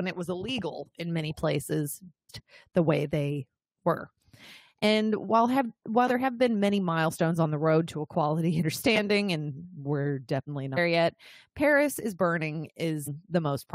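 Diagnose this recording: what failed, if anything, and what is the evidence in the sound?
The compressed stream carries damaged data at the codec stage: corrupted bytes inside some frames make the decoder misread them, lose sync and hunt for the next valid frame header. Each hit is a brief chirp or blip in the speech: at 2.29 s between "illegal in many places" and "the way they were", at 8.60 to 8.63 s after "the road to equality", at 10.76 s after "we're definitely", and at 13.06 s.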